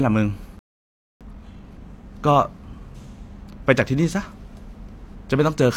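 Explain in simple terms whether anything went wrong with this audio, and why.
At 0.59 s the speech cuts out and stays silent until 1.21 s, a gap of about 0.62 s. This is a playback stall. The player most likely ran short of incoming data, or its processing was held up, so it had nothing to play.

From 1.21 to 1.81 s the speech runs at twice normal speed but keeps its usual pitch. This is time-compressed catch-up: the player trims out small slices and blends the joins to make up the delay from the stall.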